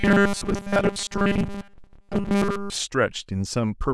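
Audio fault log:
0.01–2.74 s, robotic sound from repeated short buffers: the speech turns into a rigid, metallic buzz at a fixed 200 Hz that only loosely tracks the words. This likely comes from audio arriving too seldom, with a 5 ms buffer replayed over and over in place of most of the real signal.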